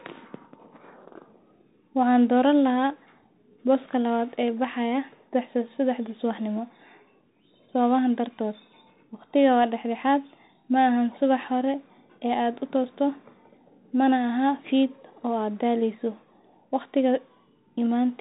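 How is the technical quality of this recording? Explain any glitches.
The recording is compromised throughout by one fault, a Bluetooth CVSD headset codec, and its damage is plainly audible. For the whole clip, the speech passes through narrowband CVSD coding, which fits a 64 kbps stream. Each sample is reduced to a single up-or-down bit, and the step size adapts only gradually. Nothing above 4 kHz survives, so the speech sounds muffled. Sharp, loud rises outrun the step, leaving s sounds scratchy. A granular hiss sits underneath. That hiss and slope distortion distinguish it from simple low-pass filtering, which would sound dull but clean.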